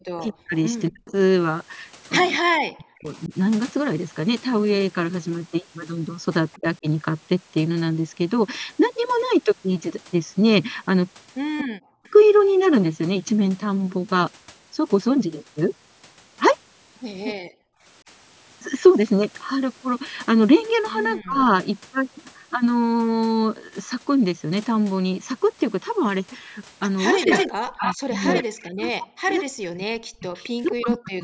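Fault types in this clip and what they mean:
Speech suppressed in double talk: The voice dips sharply, by up to about 40 dB, when both sides talk at once. It is heaviest from 0.16 to 3.32 s and over the final four seconds. The echo canceller likely could not separate near speech from loudspeaker echo.
Echo leak: A delayed copy of the voice trails the original by 229 ms. It ranges from faint scraps near 6.5 s to a strong stretch from 27.06 to 30.72 s only about 5 dB below the speech, likely loudspeaker pickup the canceller failed to remove.
Background gated by the echo canceller: From 17.45 to 17.83 s, just after a short burst of echo, the room sound drops out by about 40 dB, then returns. The canceller clamped the microphone hard while the loudspeaker was playing, then released it.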